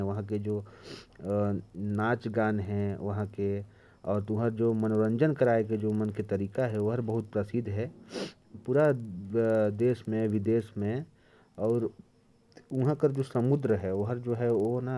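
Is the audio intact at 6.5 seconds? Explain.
No, at 6.5 seconds you're hearing the resampler restarted on every block, which runs through the whole clip. Each 50 ms block was converted from 48 kHz down to 24 kHz on its own, so every edge gets a small error, giving a steady 20 Hz ticking under the speech.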